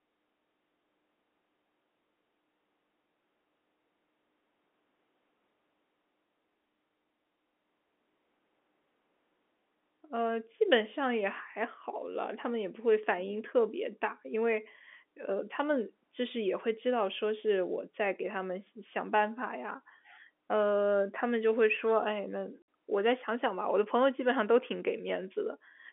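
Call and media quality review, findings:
Packet loss filled with silence at 22.62 s. A hard dropout of about 60 ms, which fits three lost 20 ms packets. Receiver inserted silence, no concealment. Telephone band (G.711 path) audible, roughly 250 Hz to 3.5 kHz.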